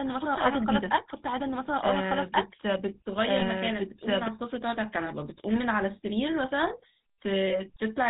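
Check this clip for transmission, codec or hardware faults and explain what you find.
Three faults are present: GSM full-rate coding throughout, a doubled audio track from the start to 4.28 s, and a brief burst of lost GSM frames near 3.4 s.

The GSM full-rate codec affects the whole clip. Its vocal-tract model, driven by sparse regular pulses, leaves the speech plainly buzzy and gravelly, which fits a 13 kbps GSM stream. On a spectrogram, energy stops sharply at 4 kHz, and harmonics look smeared and grainy.

A doubled audio track runs from the start until 4.28 s. A second full-band copy, about as loud as the original, trails it by roughly a second and a half, with no room colour and an abrupt stop. It is likely caused by a slower duplicate capture path. On a waveform, the envelope pattern repeats one and a half seconds later, and the overlap ends sharply.

The lost GSM frames fall between 3.40 and 3.44 s. 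The decoder replays the last good frame's settings, producing a short, metallic, rough ring. This fits a single lost frame. On a spectrogram it appears as a frozen, repeated spectral slice.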